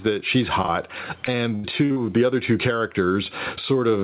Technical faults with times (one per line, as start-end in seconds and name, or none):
0.00-4.03 gain pumping
0.62-0.70 short concealed packet loss
1.26-1.98 repeated packet loss (robotic sound)